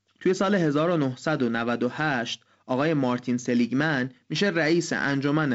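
Nothing stood out on listening to this speech, which comes through G.722 wideband telephone coding with its upper limit near 7.7 kHz.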